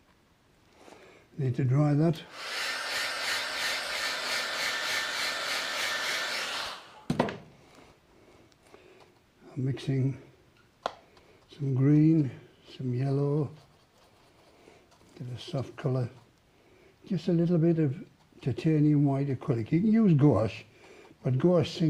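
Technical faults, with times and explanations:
No technical faults, with times and explanations, to report here.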